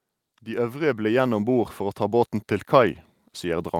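From 0.44 s to the end, automatic gain rising: the AGC judged the speech too quiet and kept pushing its gain up, so voice and background swell together.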